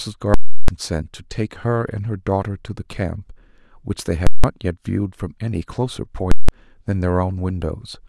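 Very loud pops bracket silent gaps at 0.34–0.68 s, 4.27–4.44 s and 6.32–6.49 s. These are invalid numbers at full scale: bad calculations pinned whole blocks of about 341 ms and 171 ms to maximum output.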